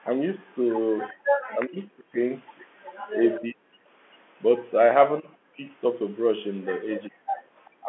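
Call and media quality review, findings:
Faint delayed copy of the talker, about 25 dB down (about 30 dB at the last), trailing by 391 ms at 0.0–1.13 s, 2.85–3.39 s and 7.03–7.09 s. Echo leak, likely far-end loudspeaker echo the canceller failed to remove.

Room sound dips briefly at 1.13–1.24 s (about 21 dB) and 7.5–7.54 s (about 14 dB). Background gated by the echo canceller clamping the microphone during loudspeaker playback.

Talker's voice ducks and breaks up over 1.52–7.89 s, roughly 1.5 s affected in total, at worst around 40 dB down. Speech suppressed in double talk, likely the canceller attenuating both sides during overlap.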